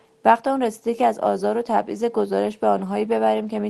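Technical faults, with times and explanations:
Throughout: clock drift between sender and receiver. The sender's clock runs roughly one and a half percent slow, so the jitter buffer keeps draining.
0.96 to 3.26 s: repeated timing corrections. The receiver pads out short pieces, adding around 50 ms and slowing the pace to 98%.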